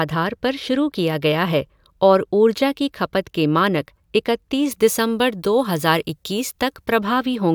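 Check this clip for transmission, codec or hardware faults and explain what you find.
There's one fault here, pre-emphasis left on, from about 4.71 to 6.98 s. The treble boost of the CD 50/15 µs curve was applied but never undone, leaving 10 kHz about 8 dB hot relative to 1 kHz, so that stretch of speech turns thin, bright and hissy on sibilants.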